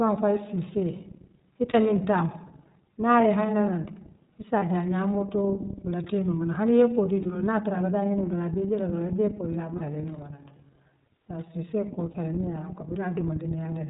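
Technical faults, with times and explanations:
Throughout: iLBC codec. The speech is band-limited, with nothing above 4 kHz, and has a slightly rough, synthetic edge that is plainly audible. iLBC is a narrowband VoIP codec that codes the excitation of each frame without relying on the previous frame, so some natural smoothness is lost. The coarseness and frame rhythm fit its 13.33 kbps mode with 30 ms frames.
1.71–1.75, 4.59–4.63, 7.23–7.26, 9.77–9.81 and 12.12–12.16 s: lost iLBC frames. Each gap is about 30 ms long and sounds like a brief held, buzzy or breathy vowel. The first is just before "miŋ taamu", the third falls between "hani yee kuwo kee" and "dulu naa tara abe", and the fourth comes right after "ayee bee kuuol daa". The decoder filled each lost packet by repeating the last pitch cycle mixed with noise. Because iLBC frames stand alone, the speech recovers almost at once.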